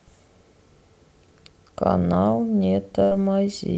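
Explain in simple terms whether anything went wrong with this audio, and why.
Around 3.03 to 3.13 s the speech briefly smears into a fading held sound, then jumps ahead. That's a burst of packet loss: about 80 ms went missing and was papered over.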